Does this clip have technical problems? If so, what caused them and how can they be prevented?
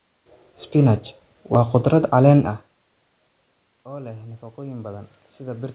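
Yes. At 1.54 s a repeated buffer gives a brief click: audio arrived late, so the last 10 ms buffer replayed once. That is too short to heard as a stutter. Prevent it with a larger playback buffer or more scheduling headroom for the audio thread.

From 3.84 s to the end, automatic gain is rising after the input fell by about 23 dB. Voice and room noise swell together, unlike the talker's own level change near 2.5 s, where only the voice shifts. Prevent it by keeping the input level steady, or by slowing or capping the gain control.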